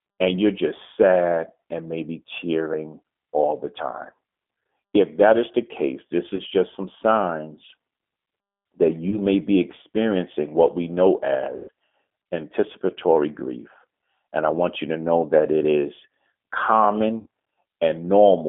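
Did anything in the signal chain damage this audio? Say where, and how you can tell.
Yes. At the codec stage, the speech passed through the G.729 codec at 8 kbit/s. Its roughly 200 Hz to 3.4 kHz band and synthetic roughness are plainly audible throughout.

On the network, VoIP packet loss was concealed by the speech codec at 6.35–6.42, 9.10–9.18, 11.56–11.71 and 17.20–17.27 s. The decoder stretched the preceding sound into a buzzy tone or coloured noise that fades, longest at 11.56 s.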